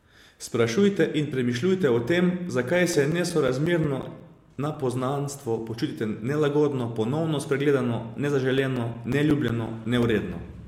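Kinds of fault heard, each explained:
CD scratch ticks: two runs of regular tiny clicks, about six a second, the longest roughly 10 ms. One run follows "in premišljujte o tem" (2.75–5.10 s), another plays at 8.58–10.21 s. A disc blemish defeats error correction once per revolution, so the player patches or mutes those samples.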